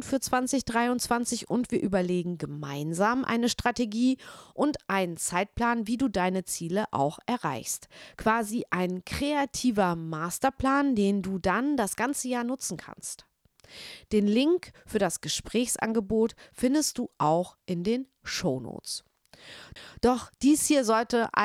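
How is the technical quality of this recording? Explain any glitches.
One glitch stands out in this speech recording: a CD skip at 19.75 s. The laser jumped to another turn of the disc's spiral. Playback mutes for about 10 ms, giving a tick. The speech then resumes from a different point, so a short stretch is displaced.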